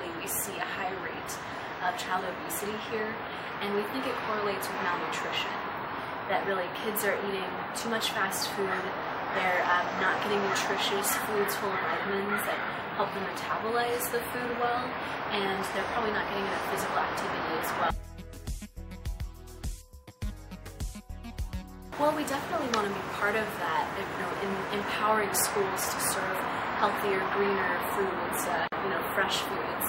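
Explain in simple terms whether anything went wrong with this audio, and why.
Near the end, at 28.68 s, the sound drops out for about 46 ms and then picks up exactly where it stopped at 28.72 s. This is a gap at a join of encoded pieces. The audio was compressed in separate chunks and stitched back together without trimming the ends. Each chunk's encoder adds a little silence at its start and padding at its end, and that leftover silence shows up as a short hole with smeared edges.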